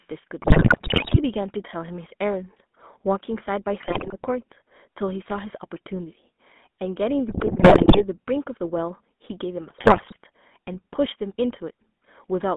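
The whole clip of speech carries the sound of the GSM full-rate codec. The band runs from 200 Hz to 3.5 kHz. The voice has a buzzy, gravelly roughness, which fits a 13 kbps pulse-excited vocal-tract model rebuilding it.

GSM bit errors break in at 0.42 to 1.19 s, 3.8 to 4.15 s, 7.28 to 8.18 s and 9.78 to 10.18 s. Corrupted filter, pitch and gain values reach the decoder. The voice squawks, pops and gargles, with sudden level jumps.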